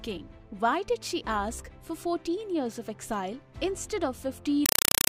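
From 4.66 s until the end, the sound gives way to very loud, harsh, chattering static: short 4 ms bursts of noise separated by silence, repeating 31.25 times a second. This is a compressed stream played as audio. An AC-3 (Dolby Digital) bitstream, with a burst size and rate that fit a 192 kbps stream, was taken as ordinary samples instead of being decoded. Each coded frame comes out as a burst of noise followed by zero padding.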